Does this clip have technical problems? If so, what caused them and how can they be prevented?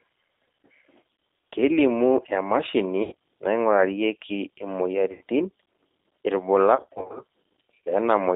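Yes. The call ran through the G.729 codec at 8 kbit/s, rebuilding the speech from a vocal tract filter, a pitch predictor and a few pulses per frame, within a 300 Hz to 3.7 kHz line band. The speech is narrowband and plainly rough and synthetic throughout. Using a wideband codec such as Opus prevents this.

VoIP packet loss concealed by the speech codec occurs four times. Packets went missing and the decoder stretched its last pitch and filter with falling gain, turning the speech into a fading buzzy smear. This happens at 1.16 to 1.24 s, just before "kelimu emashini naingurarieki", where about 60 ms is lost in gaps of up to 30 ms. It happens again at 3.03 to 3.13 s, just after "kelimu emashini", and at 5.12 to 5.21 s, each a 90 ms dropout. The worst stretch is 6.76 to 7.20 s, where gaps of up to 40 ms add up to about 240 ms. A steadier network path with a larger jitter buffer or forward error correction prevents this.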